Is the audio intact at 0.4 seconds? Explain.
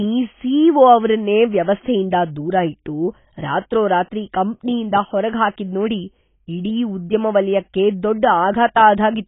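No. At 0.4 s the speech carries the same damage heard across the whole clip: nothing above about 3.8 kHz, and a dull, smeared, warbling texture. This points to heavy AAC compression, likely AAC-LC at a low bitrate near 16 kbps. The encoder drops the upper band and coarsely quantises what remains.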